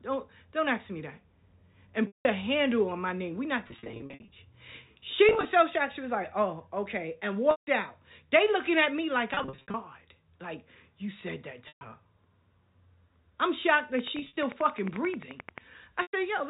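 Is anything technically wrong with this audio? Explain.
Yes. Eight stretches of packet loss with pitch repetition start at 2.07, 3.68, 5.29, 7.51, 9.34, 11.68, 14.19 and 16.02 s. The receiver bridges each gap by repeating the last pitch period, which gives a held, buzzy tone. The solid gaps of 110 to 180 ms fade toward silence before the speech cross-fades back. The scattered losses around 3.68, 5.29, 9.34 and 14.19 s have runs of only 20 to 60 ms and give several brief buzzy stutters.

A train of clicks runs from 13.99 to 15.59 s: about twenty evenly spaced pulses at 11.3 per second, peaking well above the speech. Likely cause is interference or a faulty interface, heard as steady ticking over the narrowband G.711 telephone sound.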